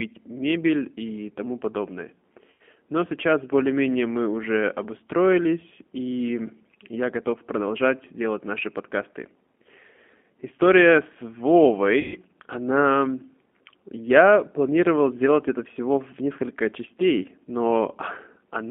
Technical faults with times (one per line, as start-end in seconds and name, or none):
0.00-18.71 G.729 codec
2.50-2.61 VoIP packet loss concealed by the speech codec
12.00-12.21 VoIP packet loss concealed by the speech codec